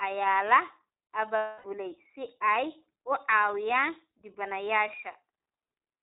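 A speech clip carried throughout by the iLBC codec, with plainly audible coding damage. The sound stops at 4 kHz, so sibilants lose their hiss, and the voice has a slightly rough, synthetic edge. The texture fits iLBC's 15.2 kbps mode with 20 ms frames, each frame's excitation coded on its own. Plain low-pass filtering would stay smooth, and an adaptive codec such as AMR would sound more muffled than gritty. From 1.36 to 1.66 s there are lost iLBC frames: about 280 ms of audio, which fits roughly 14 frames of 20 ms, is replaced by the decoder repeating the last pitch cycle with added noise and fading it. The gap sounds like a held, buzzy, breathy vowel rather than silence or a stutter. Because each iLBC frame stands alone, the voice comes back clean right away at "si ay u", without the smeared recovery heard after losses in codecs whose frames depend on the previous frame.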